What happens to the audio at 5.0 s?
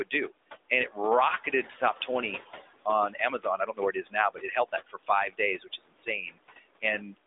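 At 5.0 s the sound is near the end of a stretch of speech cut by the noise suppressor, running from 3.13 to 5.10 s. About a second of it in total has been judged as noise and pulled down with the background, by up to about 21 dB, so soft consonants and word endings sound swallowed or faint. On a waveform the speech envelope sags abruptly, and on a spectrogram the weaker speech components thin out or vanish.

The noise suppressor artifacts run through the clip as well. The suppressor lowers the bands it treats as steady noise by about 20 dB, frame by frame, so the residual room noise sinks between the words and rises under them. A spectrogram shows the background as patchy, blinking speckles between and under the harmonics.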